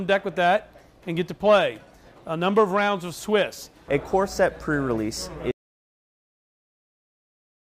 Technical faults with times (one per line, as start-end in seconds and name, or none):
5.51-7.78 audio dropout to silence